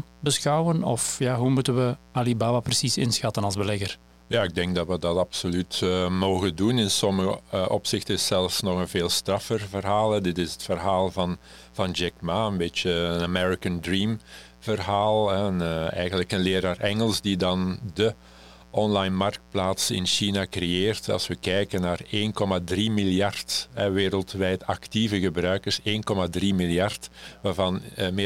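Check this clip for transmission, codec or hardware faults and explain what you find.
A hardware fault is present: mains buzz runs through the whole recording. Switching spikes from a 60 Hz supply leak into the speech path twice per cycle, stacking harmonics up into the kilohertz range. The result is a steady, raspy buzz roughly 30 dB below the speech.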